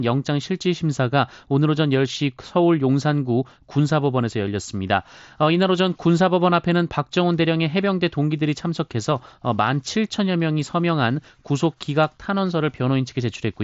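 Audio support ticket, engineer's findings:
Listened through the speech in full and nothing stood out, with the audio carried over the Bluetooth mSBC headset codec path and its bandwidth topping out around 7.7 kHz.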